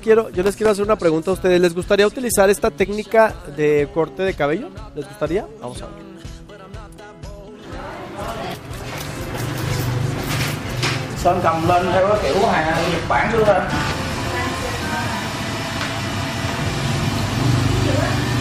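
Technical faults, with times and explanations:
0.43–0.68 s, processor overload crackle: the processor falls behind and misses about ten buffer deadlines, each buffer being roughly 1.5 ms long. Every miss drops a tiny stretch of silence with hard edges into the sound, and the rapid run of them produces a quarter-second burst of gritty crackle.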